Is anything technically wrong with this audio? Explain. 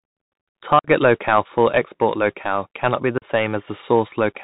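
Yes. Throughout, the speech sounds dull and scratchy, with a granular hiss underneath and nothing above 4 kHz. This is the Bluetooth CVSD headset codec, whose one-bit, 64 kbps up-or-down steps can't follow fast detail.

Two short holes with abrupt edges cut the speech, at 0.79–0.88 s, just before "locale for export locale", and at 3.18–3.25 s, just after "export locale cannot be". The speech returns briefly quieter after each. This is unconcealed Bluetooth headset packet loss: gaps of about 52 ms and 38 ms, roughly seven and five packets, were filled with silence or an idle pattern.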